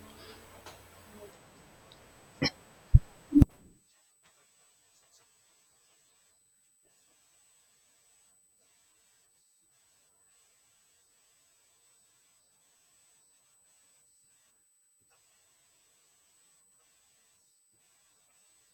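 Speech with a USB whine running the full length of the recording: a steady, fixed-pitch tone at 8 kHz, sitting roughly 30 dB below the speech. It comes from the 125 microsecond microframe rhythm of USB current draw leaking into the audio through shared power or ground. The exact 8 kHz pitch sets it apart from mains hum, which sits at 50 or 60 Hz and its harmonics, and from switching-supply whine, which tends to wander in pitch.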